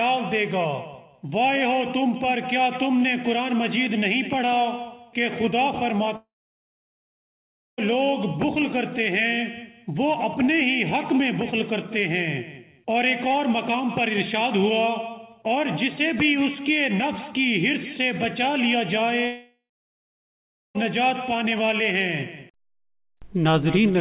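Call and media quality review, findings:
Long network dropout, 6.16–7.80 s and 19.26–20.77 s: about 1.6 s and 1.5 s of audio lost, likely a network dropout. Brief fading buzz carried over from the last sound, then silence (1.5 s, 1.1 s), then audio resumes with the gap missing. Band stops at 4 kHz throughout, which fits a G.711 call codec.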